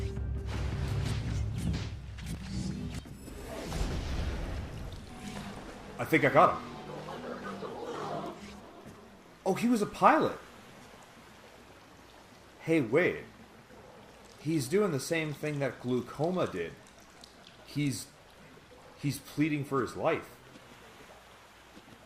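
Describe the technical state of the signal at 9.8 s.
At 9.8 s the signal runs cleanly, with no dropout, distortion, or other technical fault at that moment.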